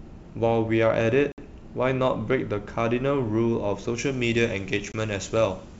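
At 1.32 s there's packet loss on the ADPCM call: a hard-edged 60 ms hole, a few packets' worth, then the speech comes back slightly distorted while the decoder's predictor catches up. From 3.98 s to the end, pre-emphasis was left on. Treble sits about 14 dB hot at 10 kHz against 1 kHz, which fits an FM 75 µs curve, so the sound is thin and hissy. Inside that stretch, at 4.92 s, a shorter 20 ms dropout, about one packet, gives the same brief distortion on re-entry.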